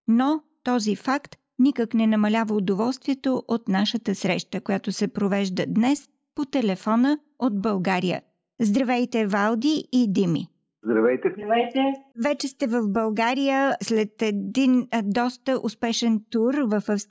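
Nothing goes wrong anywhere in this one; there's no glitch or hiccup to point to at any moment.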